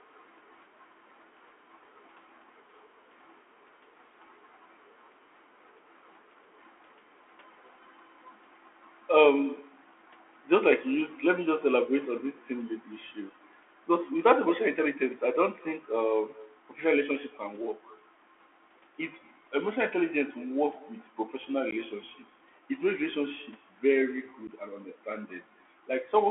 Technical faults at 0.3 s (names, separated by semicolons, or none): echo with no canceller; Bluetooth CVSD headset codec